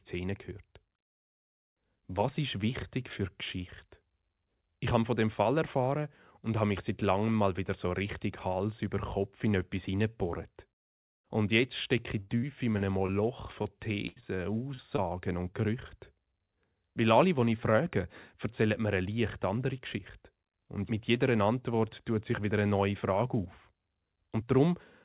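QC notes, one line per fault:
12.2–13.1 s, repeated packet loss (robotic sound): right after "jetzt stecke", five gaps totalling about 180 ms, the longest 79 ms, leave roughly a fifth of the stretch patched. Recurring fills give choppy sound with pieces missing, unlike an isolated dropout.
13.63–13.66, 14.20–14.24, 14.74–14.80, 14.96–15.00, 15.52–15.63 s, short concealed packet loss: single 20–40 ms holes filled by extending the preceding sound. Each is a brief smear or wobble, too short to hold a buzz. The last adds a sliver of time.
14.08–14.18 s, burst of packet loss: about 80 ms lost in one run. The fill sustains and fades the last sound into a held buzz or hiss, then the audio resumes further on, past missing material.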